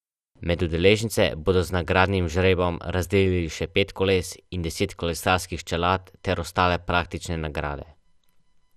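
From start to finish the speech sounds dull and plainly gurgling, with a granular roughness and nothing above 14.4 kHz. This is likely MP2 compression at a low bitrate, which fits about 80 kbps: upper sub-bands drop out and the remaining bands are coarsely quantised.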